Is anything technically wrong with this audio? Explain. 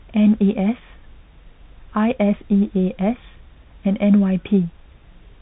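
Yes. Throughout the speech, the audio carries the marks of the Bluetooth CVSD headset codec, and the damage is plainly audible. CVSD codes each sample as a single up-or-down bit with an adapting step size, which fits a 64 kbit/s headset link. Nothing above 4 kHz survives, so the speech sounds narrow and muffled. Loud, bright sounds outpace the step and distort, s sounds come out scratchy, and a granular hiss sits beneath the speech.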